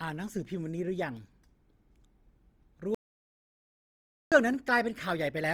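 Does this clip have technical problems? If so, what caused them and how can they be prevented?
Yes. Throughout, the speech sounds rough and grainy rather than swirly, which points to Opus compression, likely at a low music-mode rate near 24 kbps. Encoding at a higher bitrate prevents it.

From 2.95 to 4.32 s, an audio dropout to silence leaves 1.37 s of silence with no room tone, unlike a noise gate's fade, likely from lost input. Secure connections and monitored input prevent it.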